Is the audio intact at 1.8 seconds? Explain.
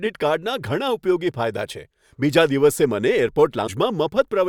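Yes, at 1.8 seconds the speech runs without any audible break, dropout, click or other technical fault.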